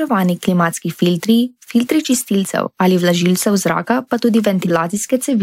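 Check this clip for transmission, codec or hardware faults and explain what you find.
Three corrupt frame decoded faults occur in this speech. They fall at 2.03–2.17 s after "klimatski filtri filtri" (a few frames), at 3.15–3.19 s before "zraka pa tudi" (one frame), and at 4.62–4.70 s after "zraka pa tudi" (a couple of frames).

Damaged frames were decoded anyway. Misread gains and codes put energy in the wrong bands, producing squeaky blips and noise bursts. The first is loudest, peaking around -5 dBFS. A spectrogram shows brief vertical smears unrelated to the speech harmonics, and the waveform shows abrupt spikes.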